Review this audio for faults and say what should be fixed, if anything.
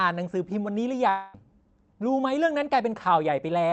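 From about 1.09 s to 1.35 s the speech drops out for roughly a quarter of a second and is replaced by a buzzy, hissy smear of the preceding sound that fades. There's no clean silence in there; the fill covers the whole gap. Then the speech picks up again further on, with that stretch simply gone. That's a long network dropout, likely packets lost in transit, with the receiver's concealment papering over the hole. The top end is capped around 8 kHz, as you'd expect from an Opus call path. To prevent it, give the link more headroom or turn on redundancy such as Opus in-band FEC so short bursts of loss can be recovered.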